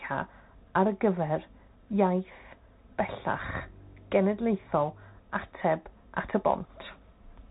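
Speech passes through a Bluetooth CVSD headset codec throughout. Nothing above 4 kHz survives. S sounds turn scratchy over granular hiss, which fits a 64 kbps link.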